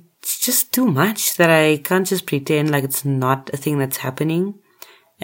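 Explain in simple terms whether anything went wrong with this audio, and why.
Nothing stood out on listening to this recording of speech, so there is no problem here to point to or explain.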